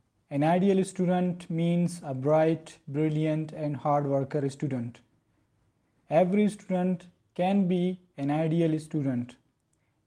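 No technical faults can be heard anywhere in this recording.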